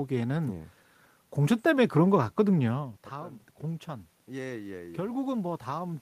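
Speech with some room noise: the talker drops back from the mic around 2.5 s, losing about 15 dB, and from 2.72 s to the end the automatic gain rising kicks in, slowly lifting voice and room noise together.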